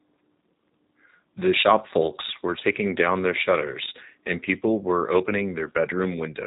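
Speech carries the G.729 codec's signature for the whole clip. Nothing above about 3.8 kHz survives, so sibilants and breath lose their top end and the sound is boxed into a narrowband telephone range. The codec damage is plainly audible: vowels sound rough and slightly synthetic, because each 10 ms frame is rebuilt from a vocal tract filter, a pitch predictor and a sparse pulse excitation rather than the original waveform. The sound fits a coding rate of about 8 kbit/s.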